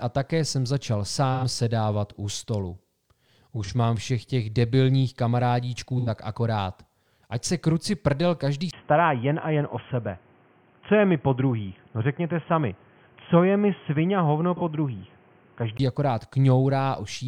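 At 1.34 s, 3.64 s (just before "mám všech těch debilních") and 5.98 s (right after "všech těch debilních kamarádíčků"), the speech briefly turns smeared and noisy: AAC frame loss with concealment. The decoder rebuilt missing audio from the last good spectrum. The first and third gaps run about 0.1 s, which fits two lost 43 ms frames; the second is about 0.07 s, consistent with one.

At 8.71 s, after "se kruci prdel každý", a 20 ms silence is followed by speech that sounds abruptly dull and boxy, with nothing above 3.3 kHz. A new background noise sits roughly 35 dB under the speech, and loudness stays about the same. This is likely an input switched to a poorer device, such as a headset call profile whose narrow band cuts the upper range. The degraded sound lasts until 15.79 s.

Inside that stretch, at 14.57 s, another AAC frame loss leaves a short concealed patch of about 0.05 s, which fits one lost frame.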